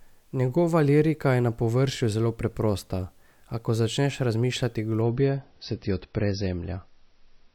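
At 5.02 s the speech switches abruptly, with no gap, to an adaptive stream at a lower bitrate, which points to a congested connection forcing a much leaner MP3 encode. To the end, the treble is gone above 5.9 kHz and swirly artefacts appear. A spectrogram shows a hard ceiling there.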